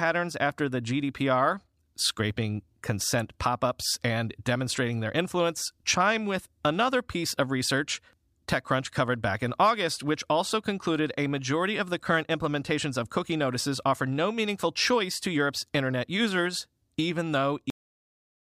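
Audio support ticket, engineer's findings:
Cut-off end at 17.70 s: final buffers never written to file or handed to output, so capture or playback stopped early. Speech ends mid-sound, no decay, straight into digital silence through 18.44 s. Probable component: recorder/output buffer flush on stop.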